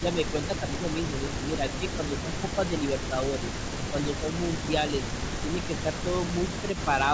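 From 0.0 s to the end, a faint delayed copy of the speech trails it by about 274 ms, roughly 20 dB down. This is echo leak: a loudspeaker end's echo canceller likely failed to remove its microphone pickup and sent it back. Unlike double-talk dips, it adds a second voice rather than removing level.

Speech suppressed in double talk is heard at 0.0–0.86 s, 1.2–3.43 s and 3.9–4.24 s, with drops of about 10 dB, and more gently, about 5 dB, at 5.43–6.09 s and 6.61–6.87 s. The speech dips, likely because the canceller turned the near talker down along with the echo while both sides spoke.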